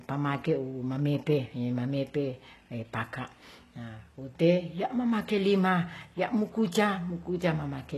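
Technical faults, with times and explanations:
Throughout, HE-AAC compression, heavy. The speech has nothing above about 12.3 kHz, and the treble that remains sounds synthetic. This is likely a low-bitrate HE-AAC v2 encode, around 16 kbps. The codec keeps only the lower spectrum in detail. The upper bands are rebuilt by copying lower content upward under a coarse envelope. Harmonics no longer align across that join. Sibilants turn gritty, metallic or lispy.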